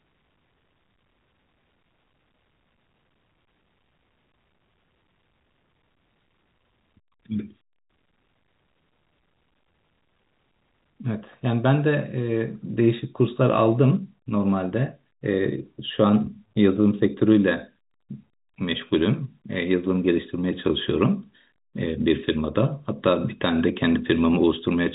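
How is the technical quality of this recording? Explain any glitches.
The technical quality is sound, and there are no glitches to explain.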